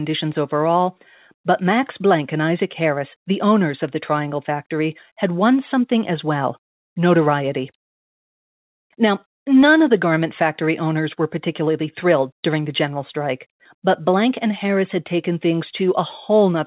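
Speech over a narrowband call path with nothing above 4 kHz, consistent with G.711 mu-law, and no faults to report.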